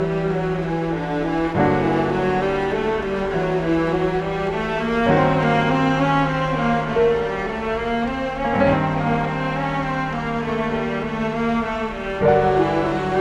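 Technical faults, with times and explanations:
No technical faults can be heard in this clip.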